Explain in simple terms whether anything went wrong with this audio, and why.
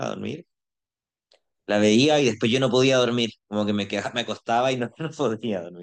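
Nothing went wrong; I can't hear any fault here.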